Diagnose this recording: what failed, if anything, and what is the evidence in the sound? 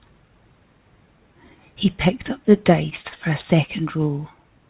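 Between 2.90 and 3.17 s the speech turns choppy and robotic, with four short holes, the longest about 36 ms. This is repeated packet loss at the network stage, ahead of the receiver's jitter buffer. Audio arrived missing or too late again and again, and the receiver covered each gap by extending the last sound, about 92 ms of it in all, so roughly a third of that stretch is synthetic. A further 40 ms is simply absent. All of it is heard through the narrowband call path, with nothing above 4 kHz, which fits G.711 at 64 kbps.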